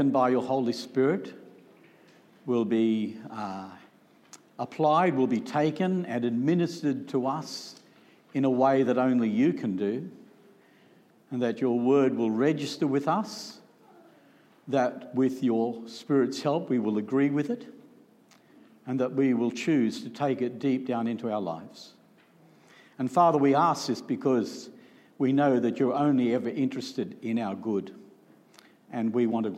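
No audible technical faults turn up anywhere in the recording.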